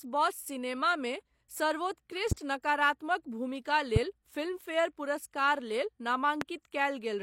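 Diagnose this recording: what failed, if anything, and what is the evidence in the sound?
The speech has nothing at all above 16.3 kHz throughout, even though the file is a high-bitrate MP3. That combination points to low-bitrate audio saved at a high bitrate, a codec-stage fault. The most likely chain is an earlier low-bitrate encode, of the kind a 32 kbit/s HE-AAC stream produces, later re-encoded as 320 kbit/s MP3. The large file carries the first encoder's losses and band limit unchanged, because re-encoding cannot rebuild discarded detail.

Three sharp, single clicks sit on top of the speech at 2.32–2.34 s, 3.96–3.99 s and 6.41–6.44 s, each lasting under 30 ms. The first two peak about 15 dB above the speech and the last about 20 dB above it. The speech continues unbroken beneath each one, so these are loud pops added to the signal rather than dropouts. The cause is likely a brief voltage spike in the analogue wiring, such as a connector, switch or static discharge, which the following circuitry shaped into a short impulse.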